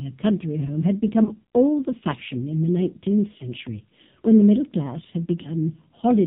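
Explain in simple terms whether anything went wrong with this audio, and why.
Throughout, the speech has the boxed-in, buzzy, robotic sound of the AMR narrowband mobile codec, the old phone-call format. Everything above 4 kHz is gone, and at this heavily squeezed setting the voice sounds synthetic rather than simply muffled like a low-quality recording.

There are also three lost AMR speech frames, each a single missing 20 ms slice. The first comes at 1.24 to 1.30 s, between "a country home had" and "all the fashion in". The second is at 3.38 to 3.50 s. The third is at 5.42 to 5.53 s, just after "the middle class had". Each is heard as a quick wobble or dip rather than a clean silent gap. The phone decoder covers the hole by repeating the last sound at lower volume.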